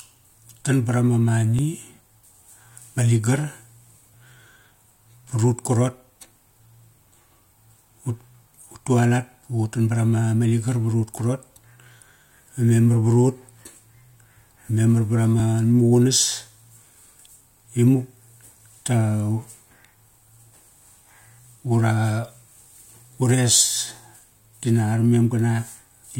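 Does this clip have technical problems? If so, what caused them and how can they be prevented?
Yes. At 1.59 s there is a repeated buffer: new audio did not reach the output in time, so the device played its last buffer a second time. The repeated piece lasts only 1.45 ms, which fits a 64-sample buffer, so it is heard as a brief click rather than a stutter, with essentially no audio lost. On a waveform, a tiny stretch appears twice with a hard step at the join. On a spectrogram, it shows as a thin vertical broadband line. Prevent it with a larger output buffer or higher priority for the audio thread.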